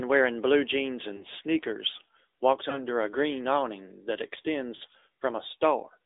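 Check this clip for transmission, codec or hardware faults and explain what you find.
Two faults are present: the whole speech clip has passed through an AMR narrowband mobile codec, and three short stretches show lost AMR speech frames.

The AMR narrowband mobile codec shapes the entire clip. The audio sits in a band of roughly 300 Hz to 3.7 kHz, and the damage is plainly audible: a buzzy, synthetic edge, as the codec rebuilds speech from a vocal-tract model and a few pulses per subframe instead of the waveform itself. The degree of buzz points to a middle AMR-NB mode near 10 kbps. A plain telephone band-limit would sound muffled but clean. This one sounds coded.

The lost AMR speech frames fall at 1.16 to 1.24 s, 2.70 to 2.82 s and 4.76 to 4.82 s. Each time, damaged frames were discarded and the decoder filled the gap by repeating its last good pitch and spectral settings at reduced level. 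The first two sound like a brief dip or warble, which fits one missing 20 ms frame. The third is a slightly longer smear, consistent with about 40 ms lost. Unlike a hard dropout, the gaps are never true silence or clicks. The sound is stretched and softened over the gap.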